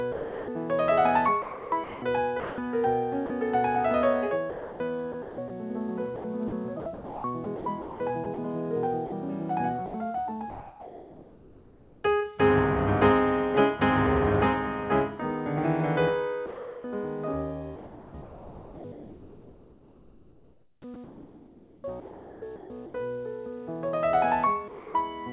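Sound dropped by the voice detector occurs at 0.12–0.48 s, 16.46–16.84 s and 24.68–24.94 s. Each time the audio gives way to steady synthetic noise for roughly a quarter to a third of a second before returning. The likely cause is a sending-side detector that judged the quiet material to be background, stopped transmitting, and let the receiver generate comfort noise until it triggered again.

Sound chopped by the voice detector affects 1.42–3.3 s, 4.5–12.04 s and 18.22–22.94 s. Over these stretches about 0.7 s, 3 s and 4 s respectively are replaced. The audio turns choppy, with its edges and quieter parts cut out. This is likely the same detector toggling repeatedly between sending and muting. Throughout, nothing is present above 4 kHz, which fits a 64 kbps G.711 A-law call codec.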